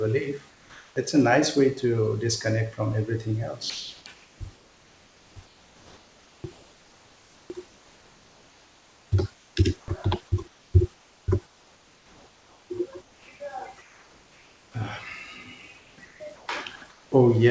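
From 0.50 to 0.96 s the room background gives way to comfort noise in place of the background, likely from discontinuous transmission filling a detected pause. It sits about 33 dB below the loudest speech and drops about 2 dB. On a spectrogram the textured noise floor becomes a smooth, even wash with its fine detail gone.

Right after "to disconnect from everything", from 3.70 to 9.88 s, the speech is chopped by the voice detector. The sender likely switched between sending and not sending several times, so quiet syllables and word edges are replaced by synthetic fill. It sounds choppy. The waveform shows speech envelopes with abruptly flattened gaps.

Comfort noise returns from 10.48 to 13.28 s and from 13.82 to 14.74 s. In the second stretch it sits about 34 dB below the speech and is again about 2 dB quieter. Both stretches show as uniform, featureless bands against the texture of the room noise around them. 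Above 8 kHz the spectrogram stays empty throughout, as expected from the G.722 call path.

From 15.78 to 17.12 s a further comfort noise patch fills the background. Inside it, from 16.76 to 16.82 s, 60 ms of sound is dropped by the voice detector, likely because a quiet speech fragment was taken for background. The sound briefly gives way to steady noise, seen as a short notch in the waveform envelope.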